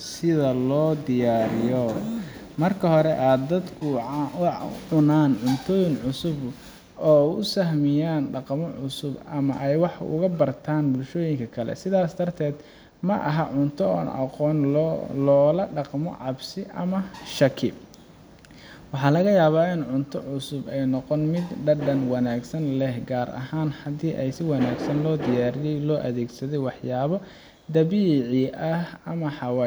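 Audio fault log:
No fault found in this speech clip.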